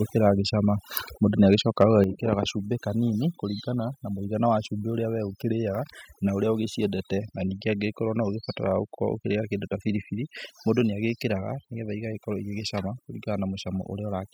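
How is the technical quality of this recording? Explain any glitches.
The recording has three kinds of fault: heavy processing throughout, plus a brief overload and a level drop early in this speech clip.

Overdone noise removal runs throughout. A noise reducer set far too aggressively shuts down individual frequency bands wherever they resemble its noise estimate, taking quiet parts of the speech with them. The background drops and breaks up into twinkling specks.

Microphone overload occurs at 1.52–1.54 s and again at 1.81–1.84 s. The input level was likely set too high, so peaks ran into the converter's ceiling, about 1 dB over the first time and about 4 dB the second, flattening roughly 1 percent and then 4 percent of samples. Those peaks carry a harsh, crackly edge.

The microphone volume stepped down at 2.04 s, just before "gacumbĩ kanini kũringana na". After those clipped peaks, the call software likely cut the device's input gain in one step, by about 6 dB. 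Voice and background drop together, abruptly.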